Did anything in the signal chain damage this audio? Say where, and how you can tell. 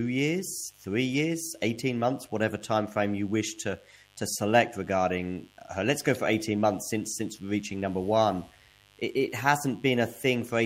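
Yes, mains buzz in the analogue wiring: a raspy 50 Hz buzz runs under the speech the whole way, well down but audible, from switching spikes getting in.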